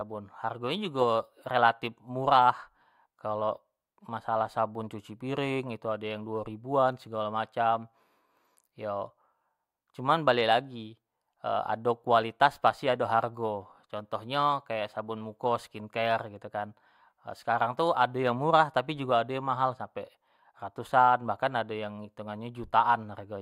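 No technical faults are audible.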